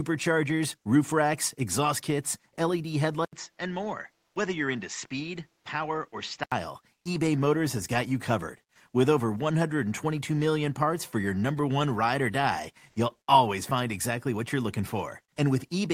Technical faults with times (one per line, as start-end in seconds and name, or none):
3.25-6.52 input switched to a poorer device
4.27-4.35 comfort noise in place of the background
6.97-7.05 comfort noise in place of the background